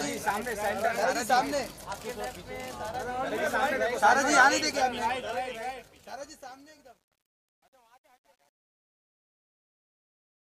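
Truncation distortion on a fade runs from 5.03 s to 10.50 s, worst from 6.07 s onward, as a 10-bit-like gain stage without dither turns the fade-out gritty. The waveform shows stair steps, and the spectrogram shows broadband speckle.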